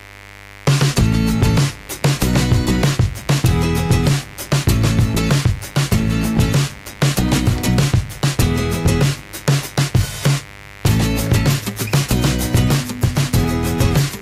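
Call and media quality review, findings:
Mains buzz, throughout the clip. Steady raspy buzz built on 50 Hz harmonics extending into the kHz range, roughly 20 dB below the signal. Probable source is a dimmer, rectifier or unshielded cable injecting switching spikes twice per mains cycle.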